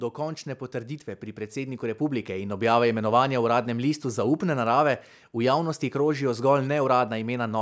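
From 1.53 to 2.81 s, just after "končne potrditve pri", automatic gain rising: the control judged the input too quiet and lifted gain about 6 dB, so speech and background swell together.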